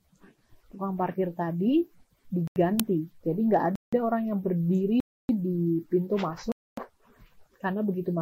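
The audio drops abruptly into dead digital silence four times, each cutting out and back with no fade: at 2.48 to 2.56 s (85 ms), 3.76 to 3.93 s (170 ms), 5.00 to 5.29 s (289 ms) and 6.52 to 6.77 s (256 ms). These blocks of digital silence come from zeroed output buffers not filled in time, and the first two lengths fit 4096- and 8192-sample buffers. At 2.80 s a loud 2.9 ms crack comes from an uninitialised buffer, which fits a 128-sample block played out from leftover memory before any audio was written to it.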